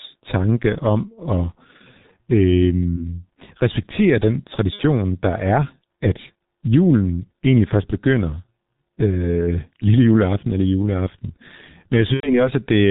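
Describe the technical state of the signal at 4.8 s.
At 4.8 s the signal sits inside a burst of VoIP packet loss concealed by the speech codec, running from 4.73 to 4.83 s. The missing audio, about 60 ms and consistent with two lost 30 ms frames, is rebuilt by the decoder, which carries forward its last pitch and filter settings while lowering the gain frame by frame. The speech smears into a buzzy tone or coloured noise that fades instead of going silent, and it stays weak and distorted for a short time after the packets return. A simple dropout, by contrast, would produce a hard gap or click.

The whole recording also carries heavy G.723.1 codec damage, at a low rate that points to about 6.3 kbit/s. Nothing above 4 kHz is passed, and the voice model advances in coarse 30 ms steps, so the speech sounds muffled and hoarse with blurred consonants. This low-rate vocoder character also sets it apart from a plain low-pass filter, which would dull the top end while leaving the voice smooth and natural.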